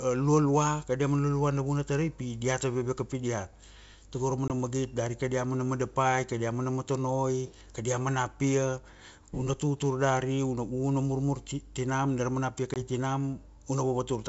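Packet loss on an ADPCM call cuts the speech at 4.48 s, just before "magit dari kadia mana", and again at 12.74 s. Each gap is about 20 ms, roughly a couple of packets, and shows as a hard-edged, full-band blank column. After each gap the out-of-step decoder returns slightly distorted and settles within tens of milliseconds.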